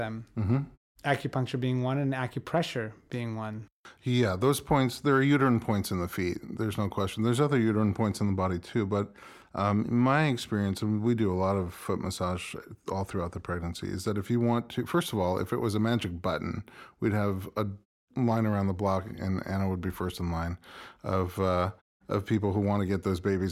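Listening to this speech recording, nothing technical stood out as wrong.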